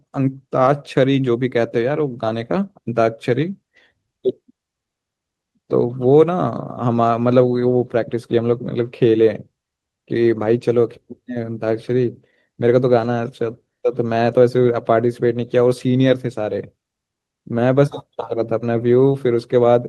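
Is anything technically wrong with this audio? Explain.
Yes. From 12.99 to 13.17 s, several packets were lost and each was rebuilt from error correction: the next packet carried a low-bitrate copy, which the decoder played instead. Nothing drops out, but that stretch sounds rougher and noisier, consistent with five separate 20 ms packets.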